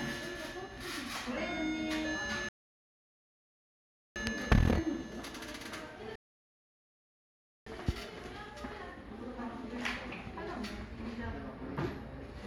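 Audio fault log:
2.49–4.16 s and 6.16–7.67 s: rebuffering stall. The audio drops to silence twice, for about 1.67 s and then 1.51 s, and each time picks up at exactly the point where it stopped, with nothing skipped. The playback buffer emptied before more data arrived, so the player paused until it refilled. No content is lost, but the pauses add roughly 3.2 s of dead air.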